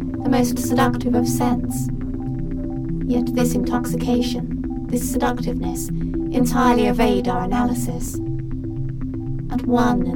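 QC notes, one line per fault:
8.06–8.10 s, chunks out of order: two 20 ms chunks swap places, so the later one plays first. Nothing is lost. The reversed order and three hard joins give a brief jumbled stutter.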